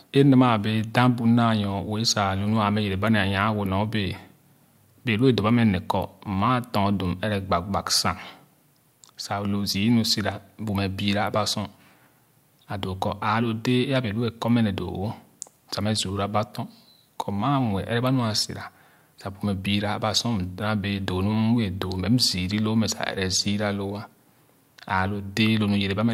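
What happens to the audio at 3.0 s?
Nothing goes wrong at 3.0 s; the speech carries on intact through that moment with no audible fault.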